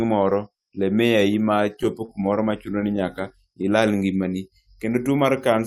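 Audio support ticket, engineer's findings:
Brief ticks and small smears in the speech, 1.83 to 2.99 s. Scattered short gaps: about seven lost or late packets, each patched by extending the preceding sound. Roughly 70 ms concealed in total, longest hole around 30 ms.

Speech drawn out at unchanged pitch, 3.52 to 4.51 s, running at 95% speed. Jitter buffer slow-down: the receiver repeated single pitch periods and pause fragments to rebuild its reserve, adding 57 ms to that stretch.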